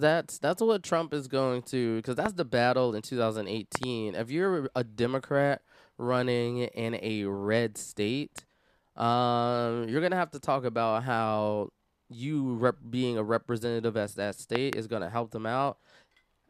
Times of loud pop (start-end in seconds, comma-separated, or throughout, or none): 2.26-2.28, 3.75-3.85, 8.38-8.40, 14.55-14.75